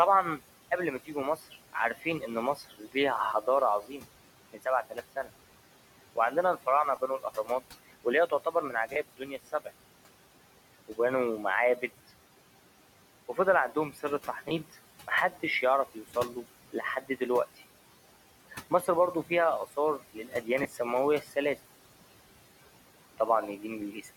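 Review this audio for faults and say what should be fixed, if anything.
Noise suppressor artifacts, throughout: the suppressor pulls the background down by about 17 dB between phrases and lets it back under speech, so the room noise pumps. Prevention: use gentler suppression depth with slower gain smoothing.

Speech cut by the noise suppressor, at 1.05–5.29 s (just after "قبل ما"), 6.16–9.7 s, 13.29–17.61 s, 18.51–21.58 s and 23.18 s to the end: quiet speech parts were treated as noise and dropped by about 11 to 19 dB. Together these total a few seconds of swallowed, faint sound. Prevention: raise the speech-presence sensitivity so soft consonants and endings aren't classified as noise. The room noise itself sits about 16 dB below speech, so milder suppression would be enough.

Lost LE Audio frames, at 6.96 s, 8.93–8.96 s, 14.49–14.51 s and 20.63–20.65 s: the LC3 decoder filled each gap by repeating the last spectrum with randomised signs. 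This gives brief noisy smears lasting 10 to 30 ms, consistent with one to three frames. Prevention: improve the Bluetooth link margin or retransmission settings so packets arrive intact.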